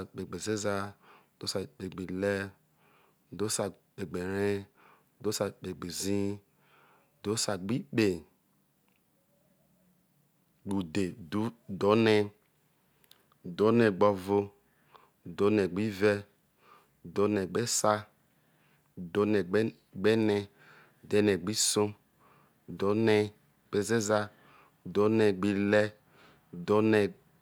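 A speech recording with nothing technically wrong in it.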